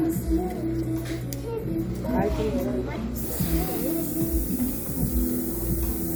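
Everyday sounds make up this recording, and from 3.18 s to the end it suffers low bit depth with noise shaping. The audio is reduced to about 5 bits, and the rounding error is pushed upward in frequency, producing a thin, steady hiss nearly as loud as the sound itself. Unlike plain low bit depth, where the error stays spread evenly across the band and sounds grainy, this hiss climbs sharply toward the top of the range.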